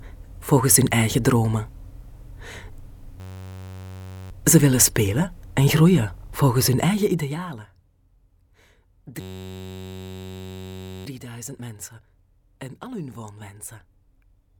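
Twice the sound locks into a steady buzz, a system hang loop: from 3.2 to 4.31 s and again from 9.21 to 11.06 s. The playback stalled while the audio hardware kept replaying the same 10.67 ms chunk over and over, which is why you hear a tone at about 94 Hz rather than a stutter. That chunk length fits a 512-sample buffer, and when the sound picks up again, hardly anything seems to be missing.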